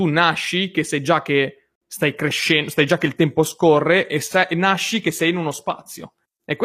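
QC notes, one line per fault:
2.01 s to the end: adaptive stream at a lower bitrate. The quality drops suddenly with no gap, the top turns synthetic and smeary, and codec artefacts rise. This points to a switch to a low-rate stream of around 24 kbit/s with replicated highs, and nothing above 14.9 kHz.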